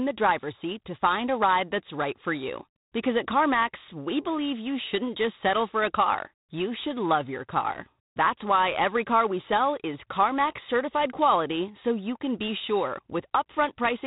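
From start to finish the speech carries G.726 ADPCM coding damage. The codec sends each sample as a few bits describing its difference from an adaptive prediction. Here the rate fits 24 kbit/s, so only three bits a sample. Prediction errors turn into a harsh, rasping hiss. It rises and falls with the speech level. Nothing passes above about 3.8 kHz, so the sound is dull and telephone-like. The damage is plainly audible.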